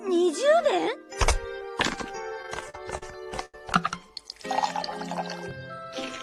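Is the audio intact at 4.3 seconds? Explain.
Yes, the audio is intact at 4.3 seconds, with no fault at that moment.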